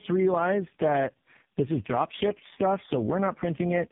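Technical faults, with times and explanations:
Throughout: tandem speech coding. Three low-rate speech codecs in a row, ending near 5 kbit/s, each re-encoding degraded output, leave rough, muffled, warbly speech with nothing above 3.7 kHz.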